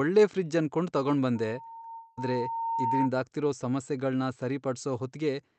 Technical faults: loudspeaker feedback squeal; short concealed packet loss; long network dropout

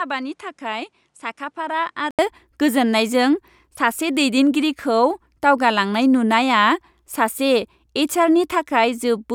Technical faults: input switched to a poorer device

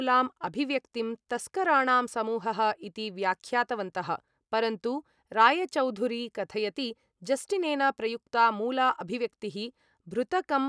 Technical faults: none

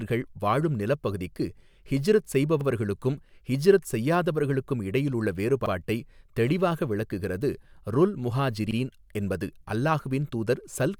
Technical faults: overlapping chunks

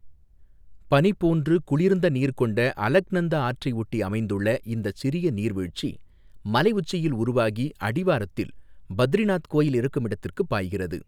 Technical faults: drift correction step

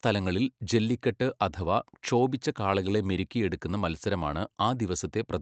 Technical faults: none

